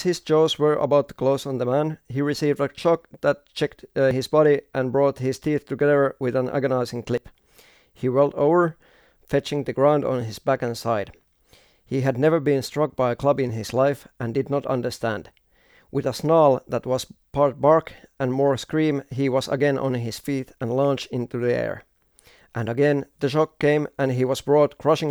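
At 4.11 s and again at 7.18 s, the speech jumps. Each is likely a dropped buffer (overrun). Roughly 40 ms of audio was overwritten before capture. The surrounding sound is spliced straight together, with no gap.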